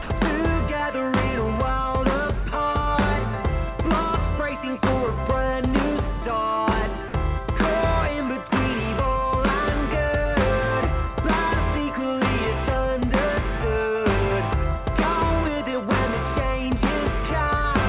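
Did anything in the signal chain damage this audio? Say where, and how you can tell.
Yes, in the call processing stage. The sound briefly gives way to a flat, steady noise three times: from 0.02 to 0.10 s for 80 ms, from 7.08 to 7.14 s for 60 ms, and from 8.50 to 8.52 s for 20 ms. This is likely sound dropped by the voice detector. The sender judged these moments to be background and stopped transmitting. The receiver filled each gap with generated comfort noise until the detector triggered again. The call path also stops at 4 kHz, consistent with G.711 A-law.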